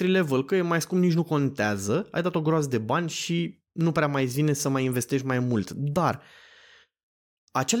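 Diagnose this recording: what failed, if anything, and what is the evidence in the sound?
Nothing stood out on listening to this speech recording, and I found no failure at any stage to point to.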